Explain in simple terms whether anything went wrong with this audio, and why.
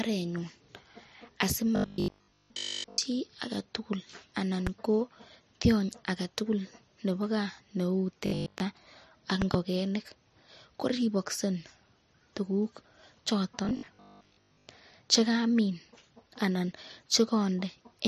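Three stretches of the speech turn into a stiff, metallic buzz, from 1.76 to 3.00 s, 8.26 to 8.62 s and 13.65 to 14.67 s. This robotic sound from repeated short buffers likely comes from audio arriving too slowly. The software keeps replaying the last 20 ms chunk, which forces a low 50 Hz drone, while most of the real speech in those stretches is skipped.

There are three loud pops. One sharp pop sits at 4.67 to 4.69 s, and a stronger pair comes between 9.42 and 9.57 s, with the speech continuing underneath. These were likely caused by a sudden electrical jolt from a plug, a switch, static or a driver hiccup landing on top of the signal.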